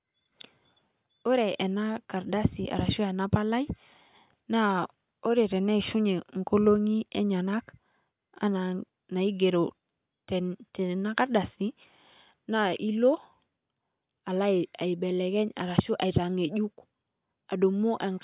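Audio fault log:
Nothing to log here, as the speech comes through without any audible fault.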